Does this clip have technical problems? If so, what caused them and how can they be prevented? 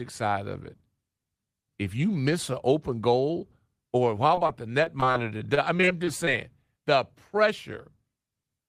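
Yes. From 4.27 s to 6.29 s the speech has repeated packet loss, which gives it a robotic sound. Over those two seconds the stream keeps losing or receiving late data, about fifteen short holes in a row, none longer than 25 ms. Each hole is filled by extending the preceding sound, so roughly 13 % of that stretch is patched rather than real audio, which makes it choppy. Prevention: use a steadier network path with forward error correction and a larger jitter buffer.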